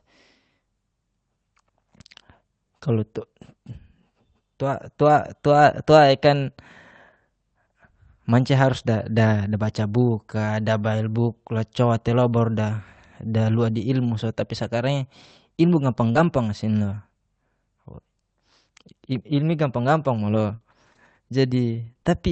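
At 16.11 s a short concealed packet loss begins. About 40 ms of the speech never arrived in time, and the receiver invented roughly 35 ms of it by stretching the preceding sound forward before easing back into real audio. The result is a brief smear lasting until 16.17 s. Unlike a plain dropout, there is no silence. The hole is papered over with a continuation that sounds slightly wrong.

Overlapping the tail of that event, from 16.15 to 16.17 s, is a lost packet rebuilt from error correction. For these 20 ms the Opus decoder had no original frame, but the following packet carried a coarse low-bitrate copy, and that copy was played instead of a guess. It sounds rougher and grainier than the surrounding speech rather than smeared. That difference separates it from the concealment just before it, which extrapolates instead of decoding a real, if degraded, copy.

Between 20.35 and 22.07 s come scattered short gaps: roughly four separate losses spread across this stretch, the longest around 40 ms, with a small share of the span concealed. 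Each hole is patched by continuing the previous sound, and some of the missing material was also rebuilt from redundant copies. What distinguishes this from the single event at 16.1 s is the pattern. Instead of one isolated blemish, there is a run of small ticks and hiccups dotted through otherwise clear speech. The call path itself, Opus at 32 kbps with audio up to 8 kHz, contributes its ordinary band limit throughout.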